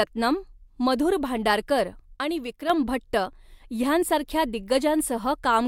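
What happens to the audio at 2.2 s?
From 2.16 to 2.70 s the speech abruptly falls about 6 dB, likely from one channel dropping out: the mono sum loses half its shared signal, a clean step rather than a gradual fade.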